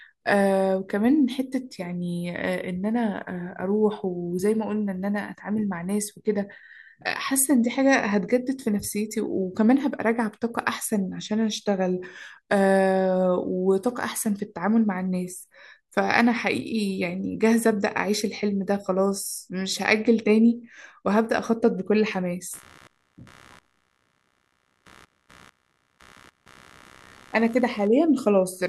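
From 22.53 s to the end, computer activity noise buzzes at around 70 pulses per second, far below the speech. Processor or mouse load disturbs the shared ground, and unlike steady mains hum it fluctuates with computer activity.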